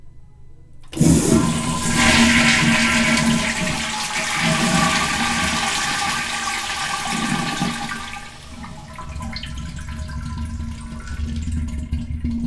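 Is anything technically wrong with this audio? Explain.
No, nothing in this audio points to a technical problem.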